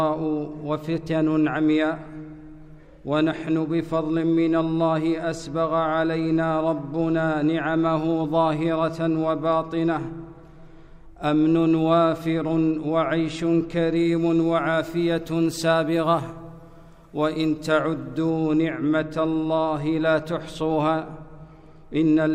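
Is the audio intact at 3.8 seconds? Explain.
Yes, at 3.8 seconds the audio plays through cleanly, with no dropout, click, distortion or other fault at that moment.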